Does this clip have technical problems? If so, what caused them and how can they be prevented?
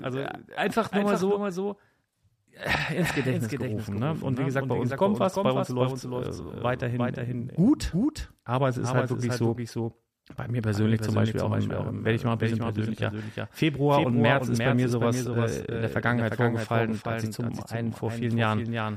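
Yes. Throughout the speech, every syllable is followed by a second, somewhat quieter copy, about 5 dB down and roughly 0.4 s late, dry and full-band with no decay. This is a doubled audio track, likely from the same signal being captured twice over a slower second path. Prevent it by routing each source through only one capture or monitoring path.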